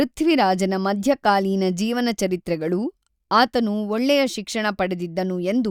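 Nothing in this stretch of speech calls for comment, since there's no technical fault to point to at any moment along the way.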